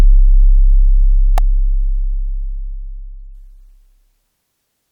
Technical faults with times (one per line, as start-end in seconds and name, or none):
1.38 electrical switching spike